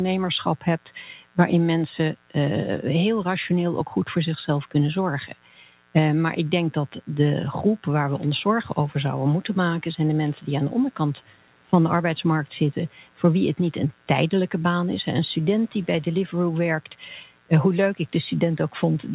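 Throughout the clip, a switching source such as a dimmer or rectifier, or an unshielded line, injects sharp spikes twice per 60 Hz mains cycle. The result is a mains buzz roughly 25 dB below the speech: a steady, raspy drone whose harmonics stack up to the call path's 4 kHz ceiling.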